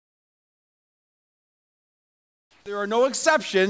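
From 0.0 to 2.66 s the background is comfort noise in place of the background: a steady, featureless hiss about 11 dB quieter than the real ambience, likely from discontinuous transmission filling the pause. On a spectrogram it shows as a smooth, unchanging wash with no texture, ending where the real background returns.

Within that stretch, from 2.44 to 2.66 s, the onset is clipped by the voice detector: about 220 ms of returning sound is missing, likely because detection lagged, so the sound starts abruptly with no soft attack. The waveform jumps from flat noise straight into the sound.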